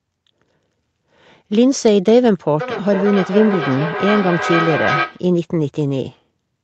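Feedback echo between two devices runs from 2.61 s to 5.3 s. A second device in the room is replaying what the first microphone sent, and that microphone captures the playback again. Its echo canceller only removes its own device's output, so it passes this sound through. The speech returns at roughly half-second intervals, each pass thinner and more ringing, with the loudest repeat only about 5 dB below the direct speech, all within the call path's band limit near 8 kHz.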